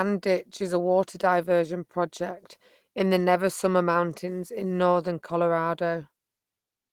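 No faults detected anywhere in this speech recording.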